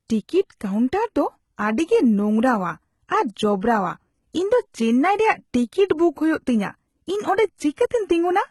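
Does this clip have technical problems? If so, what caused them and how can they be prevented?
Yes. Throughout the speech, the treble is synthetic and gritty, with nothing above 11.8 kHz, likely from heavy HE-AAC compression with spectral band replication at a bitrate near 16 kbps. Encoding at a higher bitrate, or with plain AAC, prevents this.

At 5.88 s, pre-echo spreads about 18 ms of quantisation noise ahead of a sharp attack, softening it with a brief hiss. Shorter transform blocks or more bits for transients prevent it.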